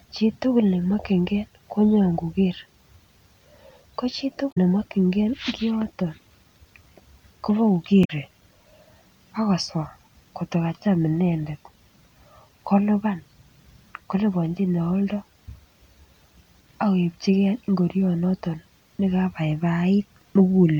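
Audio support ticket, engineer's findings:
Damaged data in the compressed stream, two spots: 4.48–4.58 s and 8.01–8.10 s, each about 90 ms. Corrupt frames misread by decoder, sync lost until next valid frame header. Result: brief squawk or blip cutting through the speech.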